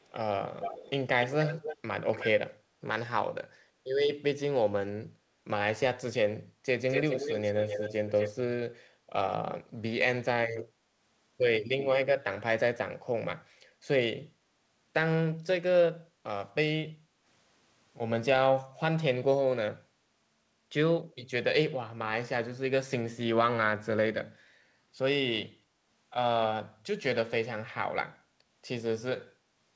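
Echo leak shows up in this speech recording at 0.00–0.11 s, 0.60–0.91 s, 1.21–1.77 s, 2.12–2.27 s and 6.89–8.41 s. A delayed second copy of the speech trails the original by 315 ms at the very start (barely audible, roughly 40 dB down), by 292 ms in the three early stretches (around 10 dB down) and by 245 ms in the longest one (only about 5 dB down). The likely cause is a far end playing the call over a loudspeaker whose echo canceller let part of the pickup back into the return path. Background gated by the echo canceller occurs at 16.08–16.23 s and 16.97–17.24 s. The room tone dips by about 7 dB for a fraction of a second each time, as the canceller pulls the microphone down while the loudspeaker is active and then releases it. The audio carries nothing above 8 kHz, which fits the G.722 call path at 64 kbps.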